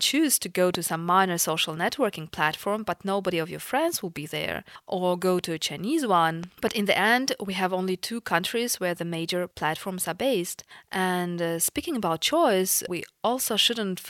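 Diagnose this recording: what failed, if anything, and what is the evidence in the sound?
Loud pop: a single pop at 0.75 to 0.77 s, roughly 15 dB above the speech, then a pair between 6.44 and 6.70 s, roughly 10 dB above. Likely a voltage pulse from a plug, switch, static or driver glitch. Waveform: sharp spikes riding over continuing speech; spectrogram: broadband vertical lines.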